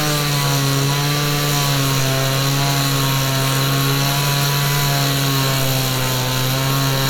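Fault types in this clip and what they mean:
No technical fault can be heard anywhere in this recording of sounds. There is nothing to list.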